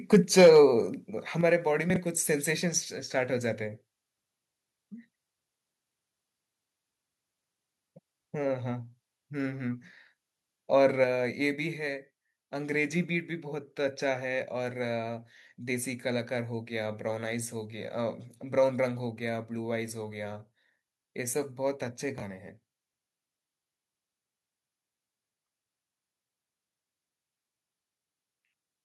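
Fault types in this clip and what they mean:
microphone overload: From 0.13 to 0.59 s the loudest syllables have a harsh, crackly edge. The input was likely driven about 6 dB past the converter's ceiling, so the tops of the strongest waveform peaks are sheared flat. Those flattened tops add hard distortion products that ride on the speech. A few percent of the samples in that stretch were clipped.
microphone volume stepped down: At 0.41, 1.41 and 11.04 s the speech and the background both drop abruptly in level, by about 2 dB, about 6 dB and about 4 dB respectively. The first drop lands in the middle of the overloaded passage. Each is a single sudden step, not a fade, which is likely the call software cutting the device's input gain after judging the microphone too hot.
chunks out of order: Around 1.9 to 1.96 s and again around 22.18 to 22.22 s the speech briefly sounds jumbled. A short block of audio plays after material that should have followed it. 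The lengths fit 20 ms chunks arriving about two chunks late in the first case and one chunk late in the second. Nothing goes missing, but the sequence breaks at hard joins.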